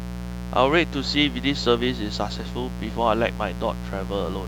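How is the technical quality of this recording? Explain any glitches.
The recording is compromised by mains buzz running through the whole speech clip, sitting fairly loud, not far below the voice. Spiky interference recurring twice per 60 Hz cycle stacks up harmonics reaching several kHz, so it sounds raspy and bright rather than like a smooth, low-pitched hum.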